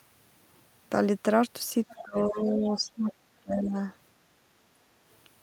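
From 1.89 to 2.02 s a faint second voice, about 20 dB under the speech, comes through. This is the other side's voice leaking through, likely because an echo canceller failed to remove a loudspeaker's playback from the microphone. On a spectrogram it shows as thin, separate harmonic traces beneath the main speech.

Right after, from 2.02 to 3.12 s, the speech is suppressed in double talk, likely because the canceller could not tell its own talker from the echo while both sides spoke, so it turned everything down. The level drops by up to about 20 dB over roughly seven tenths of a second. On the waveform this looks like sudden dips in the envelope, and on the spectrogram like faded patches.

Inside that stretch, at 2.65 to 2.81 s, the leaking voice returns more weakly, about 30 dB down.

From 3.4 to 3.76 s the suppression recurs, cutting as deep as about 25 dB for roughly four tenths of a second.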